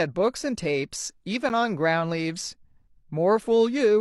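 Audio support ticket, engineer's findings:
Gap between stream segments at 1.49 s: roughly 10 ms hard-edged silent hole in the speech. Probable component: segment packager or player timeline. Mechanism: timestamps of adjacent 1.0 s segments don't abut, so the player fills the gap with silence. No audio content lost.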